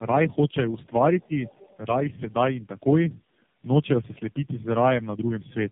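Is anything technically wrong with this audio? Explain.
Yes, there are two faults.

Tandem speech coding runs through the whole clip. The sound has passed through three low-rate speech coders in succession, with plain telephone coding between them, which fits a chain of links each using its own codec. Every coder re-encodes the previous one's degraded output, so errors stack. The speech is band-limited with nothing above 3.7 kHz, and it is rougher, more muffled and more warbly than a single narrowband codec would leave it. That compounded warble is what separates it from an ordinary phone-band call.

The other side's voice leaks through from 1.45 to 1.77 s. A second, very faint voice sits far below the main talker, roughly 30 dB down. This is likely the far end's audio playing from the talker's loudspeaker and being picked up by the microphone, with the echo canceller leaving a residue. 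It differs from a background talker in the room because it is a brief scrap rather than a continuous, natural-sounding voice.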